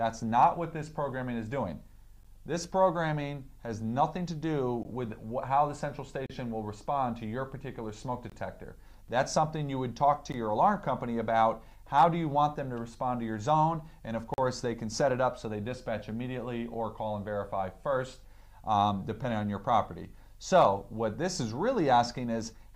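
The audio has three kinds of fault. Hard clipping flattens the peaks at 0.42 to 0.44 s, 11.98 to 12.04 s and 20.55 to 20.67 s. It is driven only about 1 to 2 dB past full scale, so it comes through as brief crackle on those loud moments rather than a continuous fuzz. That distinguishes it from the clean-edged holes elsewhere. Gaps between stream segments open at 2.23, 6.26, 8.30, 10.32 and 14.34 s, lasting 12, 34, 22, 16 and 42 ms. They fall on a two-second grid, which points to segment boundaries whose time stamps leave room the player fills with silence. Nothing is lost, since the sound simply resumes later. A block of digital silence cuts in at 4.83 s for 17 ms and at 9.08 s for 5 ms. Each is a hard drop to silence, heard as a tick or tiny hole. Unlike the segment gaps, these sit off the two-second rhythm.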